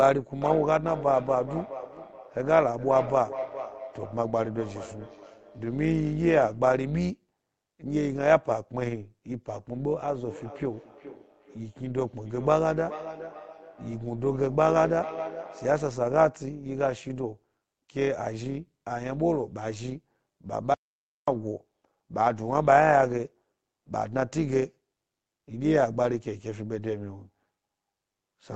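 Across the whole clip there is overlap-add ripple: the speech was split into windowed frames and rejoined with overlaps whose gains do not sum evenly, so the level swings by about 6 dB around 100 times a second. This gives a metallic buzz with extra tones around each note.

From 0.42 to 6.76 s, and again from 10.1 to 16.11 s, there is feedback echo between two devices. A second device in the same room replays the call, and the first microphone picks it up again, outside its own echo canceller's reach. Each phrase returns roughly every 0.4 s, peaking about 12 to 13 dB below the speech, with repeats growing thinner and more metallic.

From 20.74 to 21.28 s there is an audio dropout to silence. The speech stops abruptly for 0.54 s of silence, with no room tone, before resuming mid-flow. The likely cause is a lost input link or brief disconnection while recording continued writing silence. 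The call processing's high-pass filter trims the lowest bass throughout, which is normal.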